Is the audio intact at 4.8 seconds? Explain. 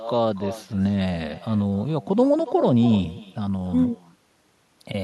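No. At 4.8 seconds the echo with no canceller is present, as it is throughout: the far end's loudspeaker feeds its microphone, returning this speech about a third of a second later as a thinner copy about 15 dB below it.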